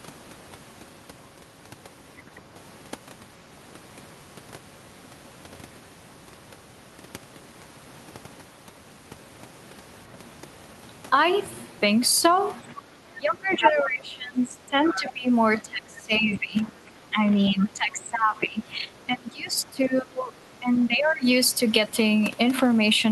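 At 2.17 to 2.22 s, a faint scrap of other speech slips in, well below the talker. This is the other side's voice leaking through. It is likely loudspeaker echo the echo canceller failed to remove.

From 12.73 to 15.3 s, the talker's level dips and breaks up in pieces. This is speech suppressed in double talk. Both sides likely spoke at once, so the canceller turned everything down. The deepest drops reach about 20 dB.

Inside that stretch the leak returns. At 13.5 to 13.69 s it is about as loud as the talker. At 14.86 to 15.1 s it is somewhat quieter.

The suppression continues at 15.62 to 17.29 s and 17.49 to 20.38 s, again down by up to about 20 dB. It ends with a shallower dip of about 15 dB at 20.59 to 21.25 s.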